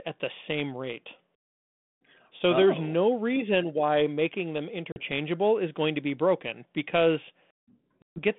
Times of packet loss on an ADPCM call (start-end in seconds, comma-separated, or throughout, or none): 4.92-5.01, 8.02-8.19